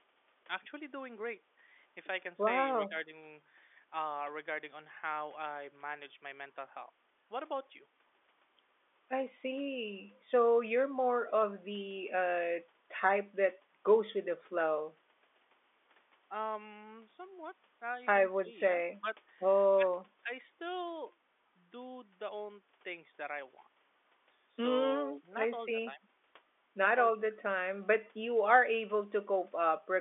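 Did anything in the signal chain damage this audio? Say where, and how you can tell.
No, nothing in the chain damaged this speech recording. What can be heard is the ordinary G.711 telephone path, with the sound held to the line band of roughly 300 Hz to 3.5 kHz by 64 kbps mu-law coding.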